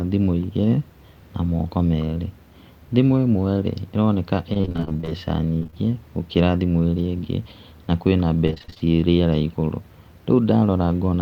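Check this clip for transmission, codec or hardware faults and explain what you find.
The speech has one kind of fault, repeated packet loss (robotic sound), in three bursts: 4.53 to 5.13 s just after "thimũ ĩmwe rĩ ĩroneka", 5.59 to 5.74 s just before "gũkĩra thimũ", and 8.46 to 8.86 s between "ingĩ na kwĩna" and "rĩera igũrũ". Each stretch turns choppy as short holes of up to about 25 ms arrive in quick succession, each patched by stretching the preceding sound, so roughly half of every burst is filled-in rather than real audio.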